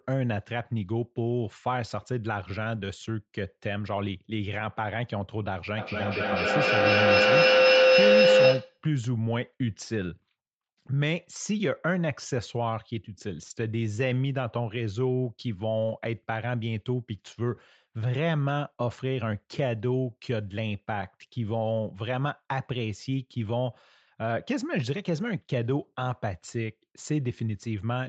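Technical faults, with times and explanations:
5.78–8.86 s, feedback howl: a mic-to-speaker loop keeps gaining each trip, so a tone around 500 Hz swells, with the loop repeating roughly every 200 ms, peaking about 9 dB above the speech.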